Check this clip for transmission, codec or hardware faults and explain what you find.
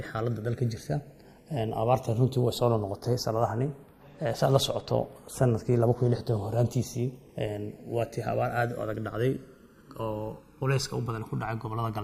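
There's one fault, and it runs the whole clip: the channels drifting apart. The left and right sides look like they were captured on two devices with independent clocks, off from each other by around 150 ppm, so the offset between them creeps up steadily until it reaches about a millisecond by the end. Fold it to mono and the comb-filter notches from that growing delay glide through the spectrum, giving a slow, swirly flanging on the sound.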